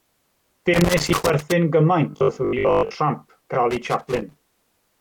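Loose connector crackle runs from 0.74 to 1.52 s: an irregular burst of scratchy crackle laid over the speech. A worn or dirty contact is making and breaking as it shifts, chopping the signal on and off in rapid, uneven bursts. Inside that stretch, at 1.12 s, damaged data in the compressed stream produces a brief blip. Corrupted bytes there leave the decoder unable to read its frame, so it loses sync and hunts for the next valid frame header, and the gap comes out as a short glitch.

From 2.11 to 2.95 s the speech turns robotic, a rigid metallic buzz pitched at 50 Hz that still roughly tracks the talker. The likely cause is repeated short buffers: fresh audio arrives too slowly, so the playback software fills the gap by replaying the last 20 ms or so over and over. Most of that stretch is repetition rather than real signal, and the 20 ms loop forces its own fixed 50 Hz pitch onto the sound.

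Damaged data strikes again from 3.53 to 3.55 s, another quick glitch as the decoder trips over a bad frame and resynchronises.

Loose connector crackle returns from 3.71 to 4.88 s. The same intermittent contact sputters through a longer burst of scratching, the signal cutting in and out as the connection wavers.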